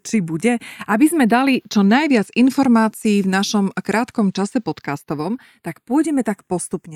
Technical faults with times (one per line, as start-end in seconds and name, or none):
0.00-6.96 channels drifting apart